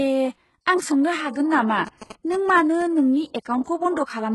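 Speech clip, and the whole thing carries heavy codec damage: nothing above 11.5 kHz, with a rebuilt, gritty, metallic top end that's likely HE-AAC compression, consistent with a very low bitrate around 12 kbps. From 1.87 to 2.82 s there are GSM signalling bursts from a nearby 2G phone, a galloping dit-dit-dit of 217 Hz buzzes sitting roughly 15 dB under the speech. Then at 3.42 to 3.46 s there's pre-echo: a 33 ms smear of hiss ahead of an attack, where the codec's block noise spills into the quiet bit just before it.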